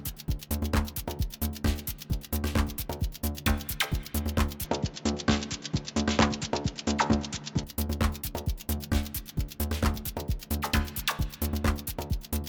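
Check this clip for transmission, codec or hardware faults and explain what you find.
One fault appears. From 4.65 to 7.64 s the sound turns dull, losing everything above 7.6 kHz, with a faint new noise floor beneath it. Level holds steady. No gap marks the change. The likely cause is an input switched to a poorer, narrower-band device.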